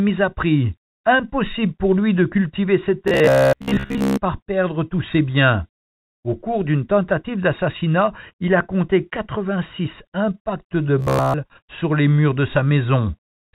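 From 3.08 to 4.19 s, between "lui de cultiver ses" and "perdre tous ses biens", and again from 10.99 to 11.34 s, after "impacts de" and before "sur les murs de", the speech turns into a rigid metallic buzz at 66.8 Hz: robotic sound from repeated short buffers, likely from audio arriving too late and a roughly 15 ms block being looped in its place, over most of the first stretch and all of the second. A spectrogram shows evenly spaced vertical striations and harmonics locked at 66.8 Hz multiples, capped at 4 kHz by the telephone band.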